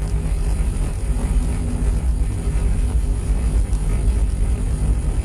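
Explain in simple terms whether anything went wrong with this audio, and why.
Yes, there's a channel delay (comb filtering) running through the whole clip. One side arrived about 20 ms late before both were mixed to mono, so the sounds come across rough or slightly doubled, with evenly spaced cancellations starting down around 30 Hz.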